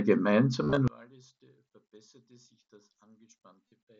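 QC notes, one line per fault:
0.63–0.77 s and 3.70 s, concealed Bluetooth headset packet loss: lost frames were filled by repeating the best-matching slice of recent waveform. The first span scatters about 90 ms of gaps over 135 ms, with no run longer than 22.5 ms. The waveform shows repeated cycles at unchanged level, and the spectrogram shows smeared, periodic harmonics with a small warble where real audio resumes.
0.88 s to end, one channel inverted: from 0.88 s the mono sum drops by about 32 dB, leaving only a faint residue. The likely cause is one stereo channel with reversed polarity, so the shared centre content cancels. The waveform collapses to near-flat, and the spectrogram fades to a dim trace across all bands.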